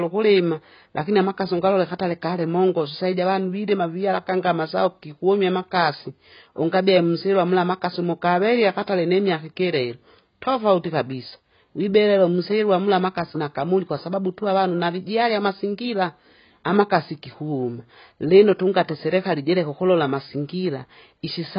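AAC compression throughout: the speech has nothing above 5.1 kHz and sounds dull, smeared and fizzy, likely AAC-LC coding starved of bits, fitting about 16 kbps.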